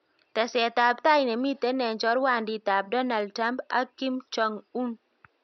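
No technical faults are audible.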